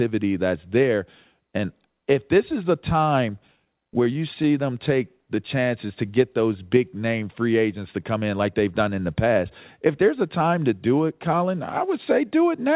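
The clip is speech carried over a call path whose band stops at 4 kHz, which fits G.711 mu-law. From 3.47 to 4.55 s there are repeated stalls (stutter). Packets arrived late, and the jitter buffer kept running dry. About a dozen brief holds fill roughly 114 ms, the longest 15 ms. Nothing is lost, but the speech drags and catches. From 5.35 to 6.13 s a jitter buffer slow-down stretches the speech to 93% speed. The receiver repeated single pitch periods to rebuild its reserve, adding 62 ms. Sounds are drawn out, but the pitch stays the same. From 8.14 to 8.43 s a jitter buffer speed-up runs the speech at 114%. The buffer held too much audio, so the receiver cut short pitch-period pieces, about 50 ms in all. The speech sounds hurried at unchanged pitch.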